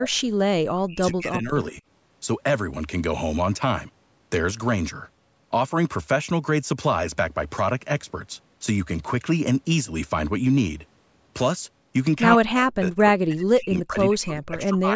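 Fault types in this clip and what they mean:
Speech suppressed in double talk: the speech sinks or vanishes in patches near the start, around 0.6 to 1.8 s and from 12.4 s to the end, dropping by up to about 40 dB, likely an echo canceller turning the talker down during overlapping far-end speech.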